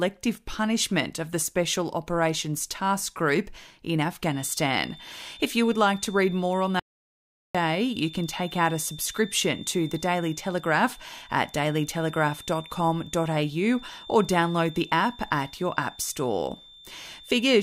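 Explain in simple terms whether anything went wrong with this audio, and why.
A feedback whistle starts at 4.2 s and runs to the end. It is a thin high tone near 3.6 kHz that swells and fades slowly, sitting quietly under the speech. The likely cause is a loudspeaker feeding back into the microphone, held just short of howling.

An audio dropout to silence happens from 6.80 s to 7.55 s. For about three quarters of a second the sound cuts to total silence, with no room noise at all. The input was likely lost briefly, so that part is gone.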